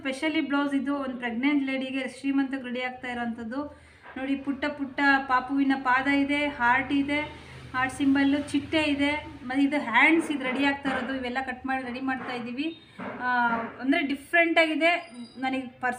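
Nothing technically wrong can be heard anywhere in the audio. No fault turns up at any point, so there is nothing to time or trace to a cause.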